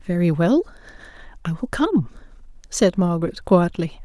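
No technical faults are audible.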